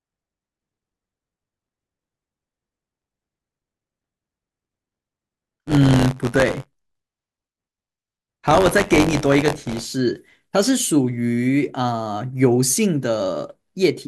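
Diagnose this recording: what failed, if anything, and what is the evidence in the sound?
Driver or buffer stage: buffer tearing runs from 0 to 9.85 s, heard as a robotic rattle at 93.8 Hz riding on the speech. The write and read pointers have crossed, so roughly a tenth of each period replays audio about 20 ms old. The buzz rate fits a 512-sample buffer.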